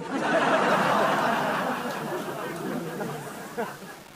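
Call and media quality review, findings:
Low bit depth without dither, 0.68 s to end. Likely a requantization stage rounding to about 6 bits with no dither. Error tracks the signal, roughly 25 dB below it. Grainy, signal-dependent distortion; quiet passages turn gritty, faintest parts sputter between steps or drop out.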